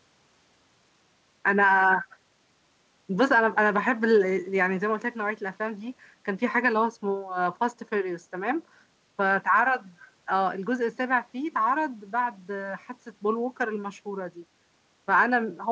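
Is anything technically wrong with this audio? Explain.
No, nothing is technically wrong with this speech recording.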